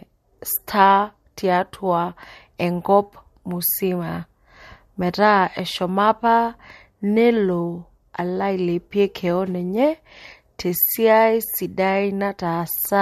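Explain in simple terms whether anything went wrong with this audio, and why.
Nothing went wrong with this audio: no fault can be heard anywhere in the speech.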